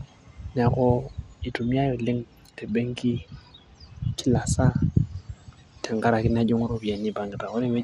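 From start to finish the speech carries plainly audible codec damage, likely MP2 compression. Nothing sounds above about 14.8 kHz, and the upper range flickers as sub-bands drop in and out, leaving a dull, gurgling, granular texture that fits a rate around 80 kbps. Unlike a simple low-pass filter, which dulls cleanly, the loss here shifts moment to moment, and the grain is coarse rather than MP3's swirly pre-echo smear.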